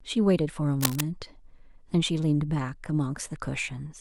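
Cable scratch noise from 0.78 to 1.02 s: dense, uneven rustling only a little below the speech, likely a worn connector or cable shifting its contact resistance.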